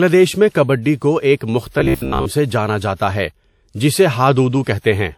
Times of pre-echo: 0.96-1.02, 1.36-1.41, 2.95-3.00, 4.63-4.84

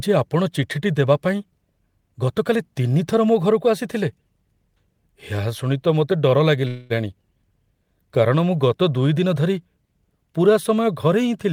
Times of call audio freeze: 6.67-6.92

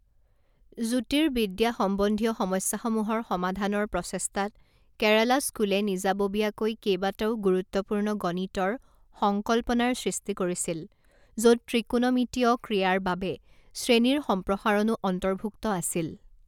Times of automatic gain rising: none

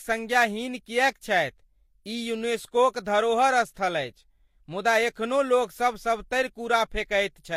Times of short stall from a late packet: none

